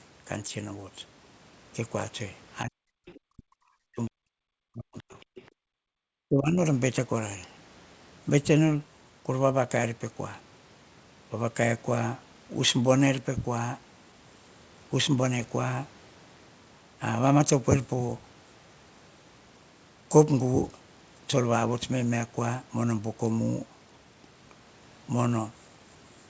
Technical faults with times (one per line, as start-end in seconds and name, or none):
2.64-3.59 speech suppressed in double talk
3.06-3.20 other side's voice leaking through
3.90-4.24 speech suppressed in double talk
4.57-5.14 speech suppressed in double talk
5.35-5.42 other side's voice leaking through
5.51-5.97 background gated by the echo canceller
6.27-6.62 speech suppressed in double talk